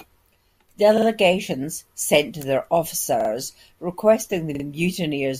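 At 0.98 to 1.07 s, 3.20 to 3.30 s and 4.55 to 4.64 s the speech stutters with a repeated buffer. New audio arrived late, so the device replayed the last 46 ms block twice more, which fits a 2048-sample buffer. Each repeat sounds like a brief mechanical judder with hard joins. Unlike a dropout, there is no silence, and the speech resumes with essentially nothing skipped.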